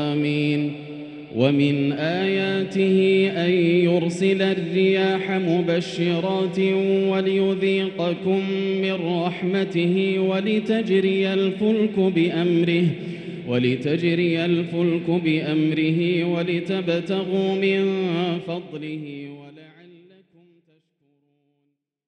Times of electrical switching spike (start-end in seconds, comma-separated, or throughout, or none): none